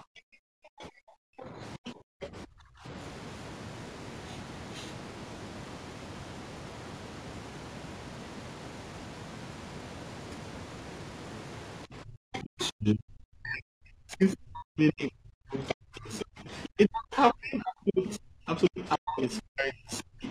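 Periodic clock jitter runs through the whole recording. Interference is wobbling the converter's sampling clock at around 3 kHz, so every component of the speech picks up sidebands spaced roughly 3 kHz above and below it. The higher parts of the voice carry the strongest sidebands, which gives the speech a rough, metallic edge. That edge disappears in the pauses. The call microphone processing limits the band to nothing above 8 kHz.

Speech suppressed in double talk affects 0.0 to 2.85 s and 11.88 to 20.29 s. The voice dips sharply, about 1.5 s in total in the first stretch and about 7 s in the second, with the deepest drops around 40 dB. The likely cause is that both sides spoke at once, and the echo canceller, unable to tell the local talker from the loudspeaker echo, turned both down.

The other side's voice leaking through appears at 0.81 to 0.85 s, 1.4 to 2.27 s, 12.33 to 12.67 s, 15.67 to 16.69 s and 19.37 to 19.41 s. 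A second voice comes through, very faint at first (around 35 dB below the talker) and louder later (roughly 15 to 20 dB below). This is likely loudspeaker playback that the echo canceller failed to remove fully from the microphone.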